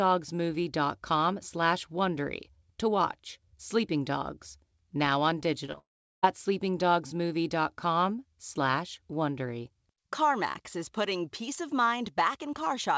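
Just after "now on", three brief smears or wobbles at 5.66, 5.72 and 5.75 s are short concealed packet loss: about 20 ms of audio each time never arrived in time, and the receiver extended the preceding sound to cover each gap before blending back.

From 5.78 to 6.24 s the sound turns into a fading buzz that gives way to roughly 0.37 s of silence before it resumes further on, with that stretch missing. This is likely a long network dropout, where no audio reached the receiver and concealment could not bridge the gap. The call passed through a G.722 link with nothing above 8 kHz.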